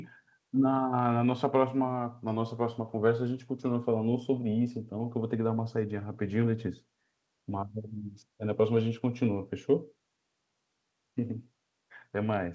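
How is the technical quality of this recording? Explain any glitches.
No glitches or faults here.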